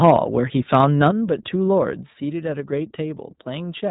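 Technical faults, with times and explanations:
Throughout: iLBC codec. The sound is band-limited to narrowband, with nothing above 4 kHz, so sibilants are dull and the timbre is boxy. Each short frame's excitation is coded independently, and the result has a plainly audible rough, slightly synthetic grain. The frame-by-frame texture fits iLBC's 20 ms mode at 15.2 kbps. The missing top octave and the granular roughness both come from low-rate frame coding that rebuilds speech from a simplified excitation model.
0.03–0.17 s and 0.73–1.08 s: microphone overload. In the first burst the loudest peaks go about 3 dB past full scale, and roughly one sample in twenty is flattened. In the second they go about 2 dB over, and a percent or two of samples are flattened. The cause is likely an input gain set too high for the converter. Cutting off the waveform tops adds a harsh, crackly edge on the peaks, strongest in the opening burst.
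0.11 s, 1.11 s and 2.13 s: microphone volume stepped down. The whole signal, background included, abruptly drops in level by about 3 dB, then about 6 dB, then about 3 dB. Each drop is a single step, not a smooth fade. The likely cause is call software cutting the device's input gain after detecting clipping. The first two steps land during or just after the distorted stretches, which fits that reaction.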